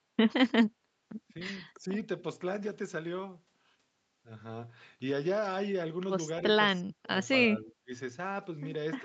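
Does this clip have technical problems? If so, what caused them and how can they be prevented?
Yes. The speech dips slightly at 1.78 to 1.9 s, almost vanishes at 6.8 to 7.09 s, and sinks sharply again at 7.59 to 7.92 s. This is likely speech suppressed in double talk: with both sides talking at once, the echo canceller mistook the local talker for loudspeaker echo and turned it down. Better double-talk detection in the echo canceller, or a headset that keeps loudspeaker echo out of the microphone, prevents it.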